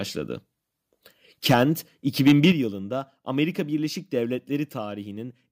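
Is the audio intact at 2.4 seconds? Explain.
No: microphone overload from 2.27 to 2.51 s. Peaks, likely from excessive input gain, exceed full scale by about 6 dB, flattening them into harsh crackle.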